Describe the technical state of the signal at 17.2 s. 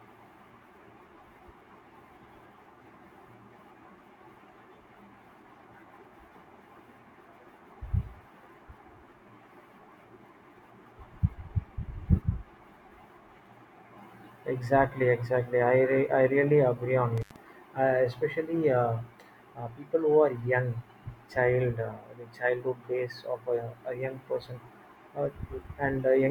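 An intermittent contact breaks the signal path between 17.18 and 17.36 s, as a loose plug or cable briefly loses connection. The speech drops out for about 81 ms, with crackle at the edges of the gap and faint hiss while the line is open.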